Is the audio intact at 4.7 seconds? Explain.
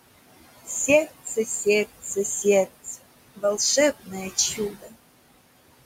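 No. At 4.7 seconds the speech is being cut by the noise suppressor, a dip running from 4.56 to 4.96 s. The suppressor mistook part of the speech for background noise and pulled it down by up to about 15 dB, so roughly a third of a second of sound comes out swallowed and faint. On a waveform the envelope sags there. A spectrogram shows the speech energy thinning out, with the softer upper bands going dark.

That moment also carries the noise suppressor artifacts present across the whole clip. Frame by frame, the processor lowers whatever bands it judges to be steady noise, by about 20 dB. The room noise, sitting about 15 dB under the speech, therefore drops away in the gaps and returns beneath the speech. On a spectrogram the noise floor looks patchy and speckled, and it is gated in and out along with the speech.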